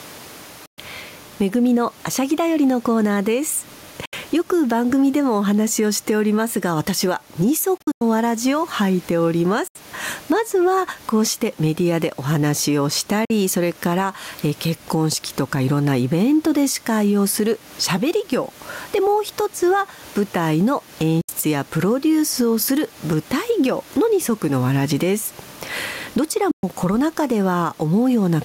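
Throughout the clip, gain pumping swings the level by around 10 dB. The room background sits normally about 33 dB below the speech. The likely cause is gain set too high, hitting a fast limiter. On the waveform, the envelope looks flattened and squashed.

Bluetooth dropouts silence the sound at 0.66, 4.05, 7.77–8.02 (scattered gaps), 9.68, 13.25, 21.21 and 26.51 s. Each lasts roughly 46–163 ms, likely from late packets. They show as flat-line gaps in the waveform and blank vertical stripes on a spectrogram.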